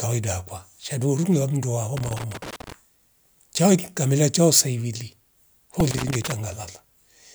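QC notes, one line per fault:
0.83 s and 5.80 s, repeated buffer: a piece of sound about 1.5 ms long, which fits a 64-sample buffer, plays twice at 0.83 s and four times at 5.80 s when new audio arrives late. Hard joins make these tiny repeats sound like a click and a brief buzz, and a few milliseconds of sound are lost.
1.97–2.72 s and 5.91–6.32 s, loose connector crackle: a worn or dirty contact makes and breaks rapidly, chopping the signal and adding pops from any DC on the line. Both stretches are heard as irregular bursts of crackle and scratching over the speech.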